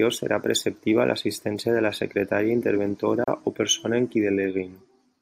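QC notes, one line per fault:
3.24 to 3.28 s, gap at a join of encoded pieces: the speech drops out for about 34 ms, a brief hole with smeared edges, then resumes exactly where it stopped. Two separately encoded pieces were joined untrimmed, leaving encoder delay and end padding as silence.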